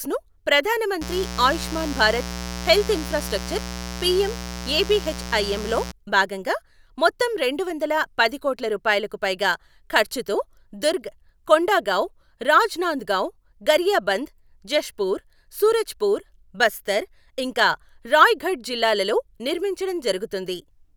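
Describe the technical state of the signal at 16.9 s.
At 16.9 s the speech signal is intact, with no audible technical fault.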